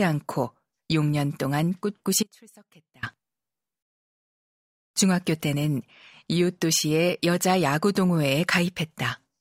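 An audio dropout to a faint residue runs from 2.23 to 3.03 s, cutting the speech off abruptly for about 0.8 s and bringing it back just as suddenly. The gap isn't silent: a faint trace of the signal remains, roughly 30 dB below its normal level. The likely cause is a brief loss of the wanted signal upstream while the path after the break stayed live, passing only leakage.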